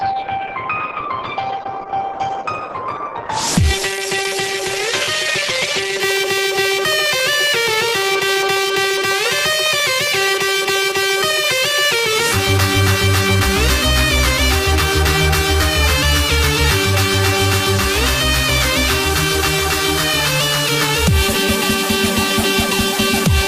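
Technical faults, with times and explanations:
0.0–6.0 s, adaptive stream starting at a low bitrate: the opening is band-limited, with nothing above 12 kHz, and has stronger codec artefacts, which fits a start near 12 kbit/s. At 6.0 s quality jumps to roughly 64 kbit/s with no gap, unlike a dropout or a reconnection.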